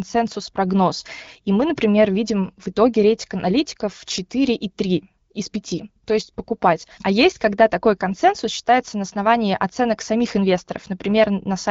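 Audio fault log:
No faults heard; speech carried over HD Voice at 12.65 kbit/s.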